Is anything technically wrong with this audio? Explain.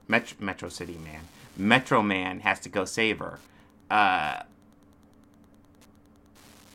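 Yes, there's Wi-Fi interference throughout: a nearby radio's beacon every 102.4 ms gets rectified in the circuitry, giving a steady ticking about ten times a second, well under the speech.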